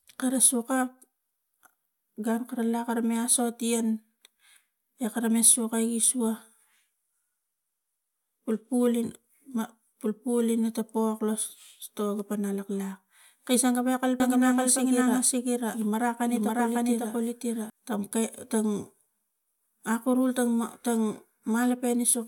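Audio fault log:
14.2–17.7 s: doubled audio track. An equally loud, full-band copy trails by about half a second, likely from a slower second capture path. The spectrogram shows duplicate patterns offset in time, ending abruptly before "tang kai tang".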